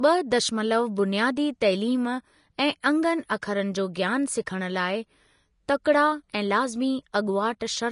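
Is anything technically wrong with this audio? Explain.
Yes. Throughout the speech, likely Vorbis compression at a low bitrate, around 34 kbps, cuts everything above 10.6 kHz and coarsely quantises the remaining treble into hissy, grainy noise.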